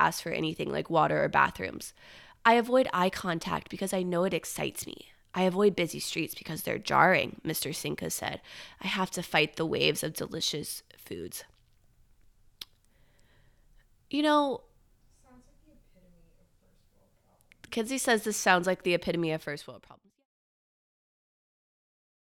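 No technical faults are audible in this recording.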